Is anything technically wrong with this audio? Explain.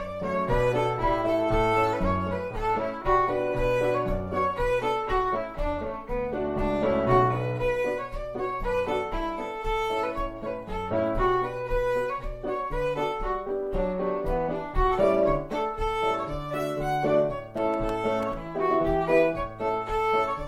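Yes. From 17.55 to 18.33 s a burst of gritty crackle tears through the sound: processor overload crackle. The processor missed a run of its tiny, sub-millisecond buffer deadlines, roughly ten, and each miss dropped a hard-edged sliver of silence into the audio.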